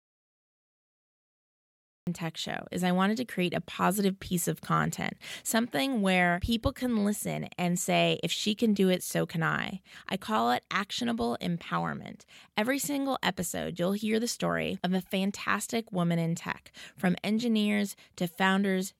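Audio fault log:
0.00–2.07 s, audio dropout to silence: the clip opens in dead silence with no room tone at all, and the speech only begins at 2.07 s. Silence this empty points to the input being lost while the recorder kept writing blank audio, the likely cause being a disconnected device, a failed link or a stray mute. Whatever was said during those first two seconds did not reach the recording and is gone.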